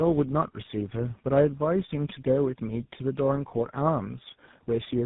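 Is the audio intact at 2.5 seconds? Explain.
No. At 2.5 seconds, as throughout, the speech sounds rough, muffled and warbly, with nothing above 3.8 kHz. This is tandem speech coding: about three low-rate speech codecs in a row, consistent with AMR-NB then GSM full rate twice, each re-encoding the previous one's degraded output.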